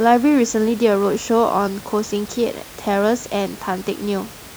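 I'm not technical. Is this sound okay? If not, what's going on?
Yes, nothing stood out on listening; there's just a little quiet background noise from the room, well beneath the speech, which is a normal part of the recording.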